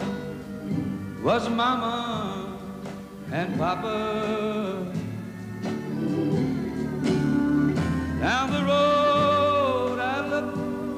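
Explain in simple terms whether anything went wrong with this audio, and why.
Nothing went wrong with this audio. There is no dropout, glitch or distortion at any point in it.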